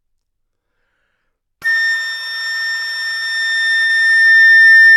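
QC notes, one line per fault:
3.17–3.24 s and 3.86–3.91 s, short concealed packet loss: in each spot about 40 ms of audio arrived too late for the decoder, and the receiver covered the gap by extending what it had just played, carrying its periodicity forward or, where the content was noisy, substituting shaped noise, before crossfading back into real audio. That synthetic patch lacks the true signal's detail, so each gap comes across as a brief smear or wobble.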